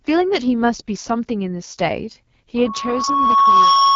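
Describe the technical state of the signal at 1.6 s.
AMR wideband (HD Voice) codec damage is present at 1.6 s, as it is throughout the clip. The speech is modelled as pulses through a vocal-tract filter below 6.4 kHz, with synthetic noise above and nothing past 7.3 kHz. The plain roughness and rasp point to about 8.85 kbit/s.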